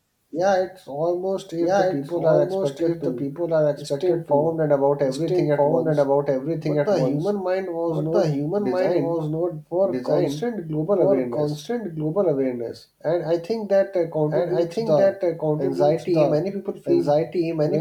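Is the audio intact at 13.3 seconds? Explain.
No. At 13.3 seconds, as throughout, a doubled audio track plays: a second, equally loud, full-band copy of the speech trails about a second and a half behind, likely from a slower capture path. The waveform and spectrogram show each pattern repeated at that offset.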